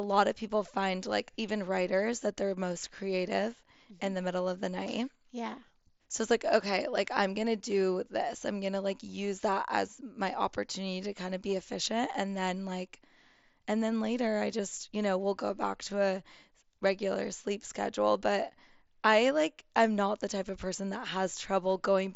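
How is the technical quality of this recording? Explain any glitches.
No glitches can be heard.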